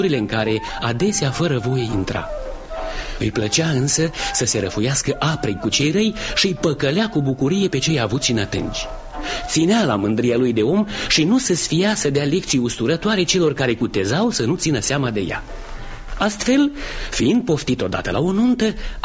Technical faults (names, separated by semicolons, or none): none